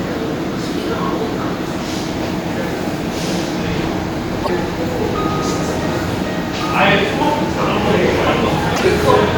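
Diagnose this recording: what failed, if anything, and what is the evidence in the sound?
The codec stage failed: damaged data in the compressed stream corrupted a stretch of frames, and the decoder misread them and lost sync until it found a valid frame header again. This happens twice, from 4.40 to 4.50 s and from 8.71 to 8.81 s. Each time, roughly 0.1 s of the sound is disrupted by a chirp, squawk, click or short hole. Decoding then locks back onto clean frames and the sound resumes.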